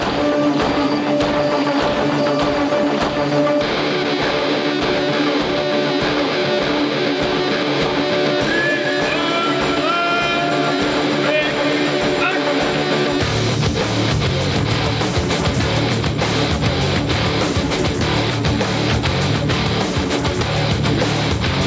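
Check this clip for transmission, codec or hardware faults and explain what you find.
One fault runs through the whole clip: gain pumping. From start to finish, the gain swings by roughly 10 dB. The likely cause is input gain set far too high, with a fast limiter or compressor pulling the level down on each peak and releasing it afterwards. Loud and quiet passages end up crowded together, and the sound comes across as squashed. The call's microphone processing, which trims the lowest bass and leaves nothing above 8 kHz, is not part of the fault.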